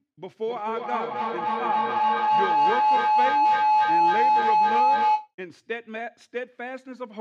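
From 0.47 s to 5.34 s the speech is overtaken by a feedback howl. A microphone is picking up a loudspeaker carrying the same call, and each pass around that loop comes back louder rather than weaker. The repeats narrow onto the frequency the loop favours, here a tone around 1 kHz, which swells to about 10 dB above the speech, with repeats coming back roughly every 0.3 s, the loop's round-trip delay.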